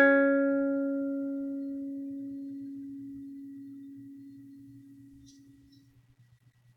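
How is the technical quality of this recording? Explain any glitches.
Nothing in this music stands out as a glitch, so there's really nothing technical to flag here.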